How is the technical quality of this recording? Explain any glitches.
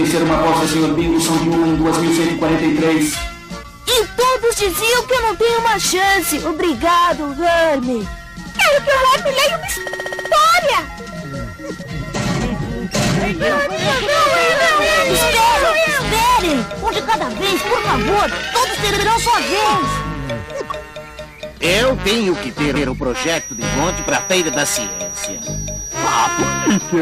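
The recording has two clear faults: three stutters from repeated frames and a high whistle near the end.

Repeated frames occur at 9.86–10.31 s, where a 64 ms block plays seven extra times and adds 448 ms; at 18.93–19.06 s, where a 64 ms block plays twice more; and at 22.75–22.88 s, where a 128 ms block plays once more. The same compressed chunk is decoded again, so the audio stutters. Unlike a dropout, nothing is missing and the clip runs longer.

A feedback whistle at 5.8 kHz runs from 23.07 s to the end, about 10 dB below the main sound, and swells and fades slowly. It is likely a speaker-to-microphone loop held just short of runaway. Unlike true howling feedback it never grows, and unlike mains hum it sits high and thin.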